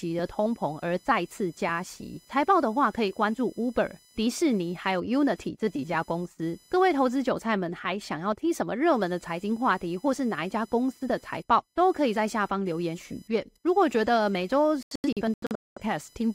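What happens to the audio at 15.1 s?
Around 15.1 s the speech breaks up into several short silent holes rather than one clean gap. Between 14.83 and 15.82 s a little over half a second of audio goes missing, scattered across about 0.94 s, with the longest single hole lasting about 0.21 s. This is a digital broadcast dropout. The receiver lost the signal or rejected corrupted frames and muted each time until valid data returned. The pattern fits roughly a dozen lost frames, and the speech in those gaps is gone for good.

A faint buzz also sits under the sound at this moment, pulsing at around 1 kHz and roughly 35 dB below the speech. It is computer activity noise. Load changes in the computer's processor, graphics card or mouse shift the ground shared with the audio circuit, so the buzz follows the machine's activity rather than the speech.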